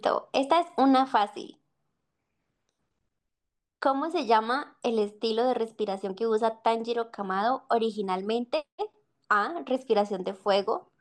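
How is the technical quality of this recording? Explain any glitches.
One glitch stands out. From 6.94 to 7.06 s there is DAB burbling. Weak reception let a small rate of bit errors corrupt the audio data, so wrong samples put short blips of noise into single sub-bands, producing a brief burble.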